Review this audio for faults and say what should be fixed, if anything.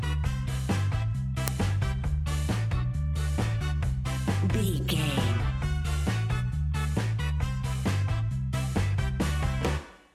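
There's an uninitialised buffer at about 1.48 s: a tiny, very loud crack, over almost instantly. A block got played before any audio was written into it, so whatever was sitting in memory came out as samples. The length fits a 64-sample buffer. To fix it, zero-fill or pre-roll every buffer before it's handed to playback.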